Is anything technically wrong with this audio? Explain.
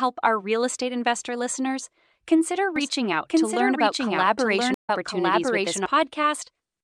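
Yes, two faults are audible. From 2.76 to 5.86 s, just after "estate investor listeners consider", there is a doubled audio track: the speech is heard twice, the copy about a second behind at roughly equal level. The likely cause is a second, slower capture path. Unlike an echo, the copy has no decay and starts and stops abruptly. At 4.74 to 4.90 s, a stream reconnect brings 114 ms of silence, then the audio resumes about 70 ms further on. Unlike a simple dropout, material is skipped as a fresh decoder restarts.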